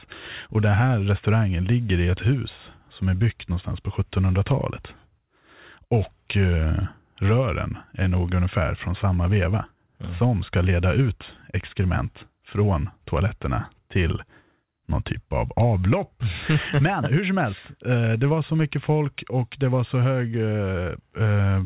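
No technical faults can be heard in the speech, which has come through a narrowband call path whose content stops at about 4 kHz, consistent with G.711 mu-law coding at 64 kbps.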